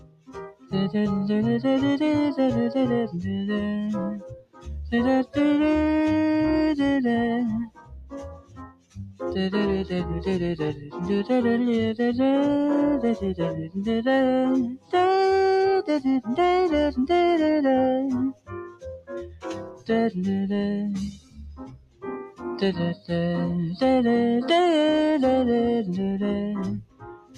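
Throughout, the sound pumps and thins, with level swinging around 15 dB as held tones and tails sink: a noise suppressor made for speech was left on.

Sound cut by the noise suppressor dips by about 21 dB at 0.0–0.73 s and 4.11–5.37 s, about 20 dB at 7.65–9.21 s, about 10 dB at 10.74–10.98 s, about 20 dB at 13.6–14.93 s and 18.31–19.89 s, about 19 dB at 21.11–23.11 s, and about 20 dB from 26.78 s to the end. The suppressor took these passages for noise and pulled them down.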